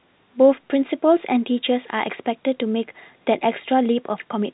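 No technical faults can be heard in the speech, which carries the narrow, band-limited sound of G.711 telephone coding, with nothing reaching above 3.9 kHz.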